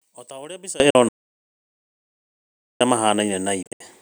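The clip is speech, and it has three kinds of fault. For the first 0.8 s, one channel inverted cancels most of the sound when the two channels are summed to mono. The level drops by about 22 dB. What remains is a faint trace, because the centred content largely cancels out. This is likely a polarity flip on one side of the stereo path. Only the difference between the channels survives the sum. A Bluetooth dropout follows at 0.90 s. It cuts a hole of about 44 ms, and the speech resumes as if it had kept playing. The length fits about three lost packets. The likely cause is packets missing their delivery deadline over the wireless link. A second Bluetooth dropout runs from 3.63 to 3.82 s. Here the losses are scattered, with about 145 ms missing over roughly 189 ms. The longest single gap is about 73 ms, so the sound stutters rather than stopping once. This points to around ten dropped packets. 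Between 1.09 and 2.81 s there is an audio dropout to silence. The speech cuts off mid-flow, and 1.72 s of silence follows, with no room tone underneath. The sound then returns abruptly. Everything in that span is lost. The input signal was likely cut off while the recording kept writing silence.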